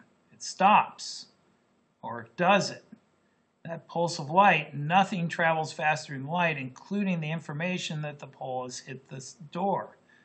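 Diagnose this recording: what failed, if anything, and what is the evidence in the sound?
Nothing failed in this recording.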